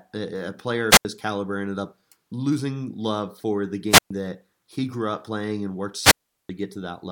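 A short burst of hiss gives way to near silence before the speech returns, at 0.90–1.05 s (about 80 ms muted), 3.89–4.11 s (about 120 ms) and 6.01–6.49 s (about 380 ms). This is wireless microphone squelch dropout: the FM radio link faded and the receiver's squelch muted the output.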